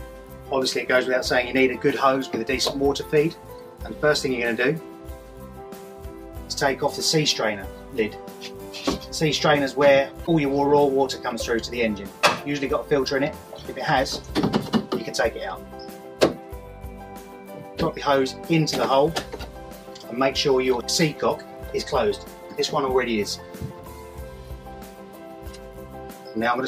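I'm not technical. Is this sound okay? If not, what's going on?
No. At about 10.23 s there is a short glitch, roughly a twentieth of a second long, ending by 10.28 s. It is caused by damaged data in a compressed stream. A small piece of the stored or transmitted file was corrupted, so the player could not read that stretch correctly. It briefly lost its place, searched for the next readable chunk, and carried on, producing a brief blip in the sound.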